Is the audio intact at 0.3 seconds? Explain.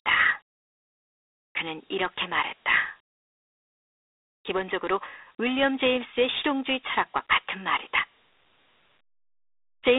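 No. Dialogic VOX ADPCM coding runs through the whole clip. Four-bit samples, fitting 32 kbps, leave gritty hiss riding the speech. Nothing remains above 3.8 kHz.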